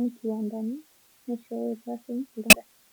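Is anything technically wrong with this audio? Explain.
Yes. Throughout, a constant, even hiss sits roughly 30 dB below the speech, without distortion. This is low bit depth with dither: about 7 bits, with dither turning rounding error into steady white noise.

From 2.50 to 2.55 s there is a brief glitch. This is damaged data in a compressed stream: corrupted frames are misread, and the decoder loses sync until it finds the next frame header.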